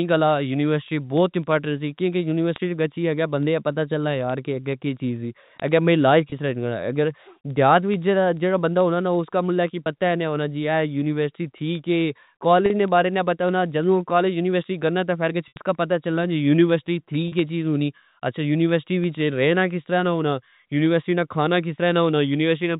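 Telephone-band speech, heard through the narrow G.711 channel, carries word clock ticks from 0.13 s to 22.77 s, roughly every tenth of a second: the receiver's unlocked clock, a few hundred ppm off, drops or repeats one sample each time. Packet loss with pitch repetition appears at 6.30 s and 9.84 s (20 ms each), 12.66 s and 17.28 s (40 ms each), and 15.48 s (80 ms). The repeated pitch period gives short buzzy holds, and the longest gap fades toward silence before speech returns.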